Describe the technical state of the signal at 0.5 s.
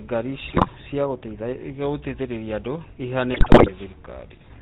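At 0.5 s the signal is inside a burst of GSM bit errors running from 0.48 to 0.69 s. Corrupted bits reach the decoder and scramble the filter, pitch and gain values it rebuilds each frame from. The spectrum lurches and the level jumps, so the sound breaks into squawks, pops and a gargling texture for about 0.21 s, which fits roughly ten consecutive damaged 20 ms frames.

Underneath, the whole clip carries plainly audible GSM full-rate codec damage, consistent with a 13 kbps stream. The codec models the vocal tract and excites it with a sparse pulse train keeping one sample in three, so the speech sounds buzzy and gravelly, and nothing above 4 kHz survives. That dull, rough band-limited character is present at 0.5 s beneath the error burst.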